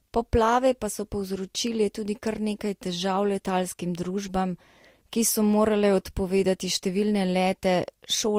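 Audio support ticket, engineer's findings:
Speech, throughout: two distinct artefact textures heard together, unlike a single low-bitrate encode's one signature. Likely transcoding between lossy codecs; the sound fits Vorbis at about 50 kbit/s re-encoded to Opus at about 48 kbit/s, with Opus spending bits on the Vorbis artefacts.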